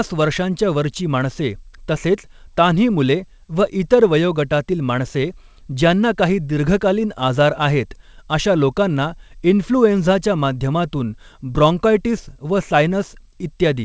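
No technical faults can be heard in this speech.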